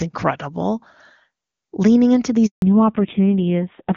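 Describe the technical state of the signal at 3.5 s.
At 3.5 s the call is in a fallback to narrowband, which begins at 2.62 s and lasts to the end of the clip. The link has abandoned the wideband HD Voice codec and dropped to an older narrowband codec, and the thin, coarse quality points to a low-rate AMR narrowband mode. Nothing above 4 kHz survives, so the speech loses its airy sibilance and sounds muffled, boxy and noticeably rougher than the clear wideband stretch before it.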